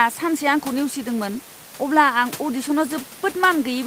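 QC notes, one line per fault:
Nothing to flag in this speech clip, and the room noise sitting about 21 dB below the voice is just the space it was recorded in.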